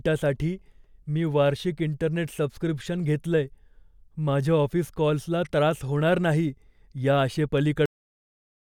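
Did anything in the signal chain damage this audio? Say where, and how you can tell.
Yes: a cut-off end at the storage or buffer stage. Speech stops mid-sound at 7.86 s and drops straight to digital silence, because the final buffers were never written.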